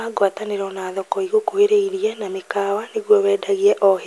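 No technical faults can be heard anywhere in the recording.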